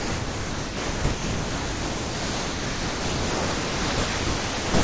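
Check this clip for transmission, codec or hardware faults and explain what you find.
Three stretches of speech give way to steady, featureless noise, likely sound dropped by the voice detector: 0.00–1.04 s, 1.12–3.98 s and 4.06–4.74 s. The sender treated real speech as background and stopped transmitting, and the receiver filled each gap with comfort noise until detection resumed. Throughout, the wideband call codec leaves nothing above 8 kHz.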